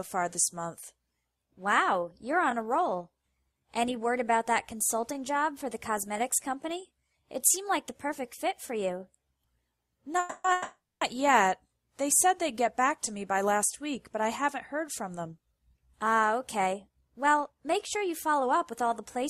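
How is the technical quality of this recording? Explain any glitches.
The recording has two audible glitch types: a pair of call audio freezes just after 10 s and a stretch of jitter buffer speed-up near the end.

The call audio freezes run from 10.19 to 10.47 s and from 10.52 to 11.04 s. In each, the sound stalls and the last moment is stretched into a fading buzz. The first fills about 250 ms, nearly all of it buzz. The second fills about 490 ms and decays to silence for about 240 ms. Packets were likely held up in transit, so the jitter buffer ran empty and the receiver extended what it had. Unlike a dropout, nothing is lost. The sound resumes exactly where it stopped, only later.

The jitter buffer speed-up runs from 14.20 s to 19.23 s. Here the sound plays at about 107% speed, so it feels slightly hurried, but the pitch stays the same. The buffer had built up excess delay, likely from the earlier stall, and the receiver trimmed tiny pitch-period slices repeatedly, removing around 0.4 s in total. 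The unchanged pitch is what separates it from a resampling or clock-rate error, which would raise the pitch along with the speed.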